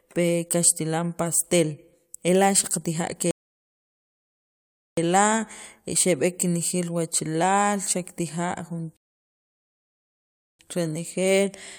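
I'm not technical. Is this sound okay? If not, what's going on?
No. The speech twice freezes into silence because the player ran out of downloaded audio, a rebuffering stall. After "xaqa tijaa" it stops from 3.31 to 4.97 s, and after "kenejeel wachalaal xakatija jun" from 8.97 to 10.59 s, each pause lasting about 1.6 s. It then picks up exactly where it stopped, with nothing missing.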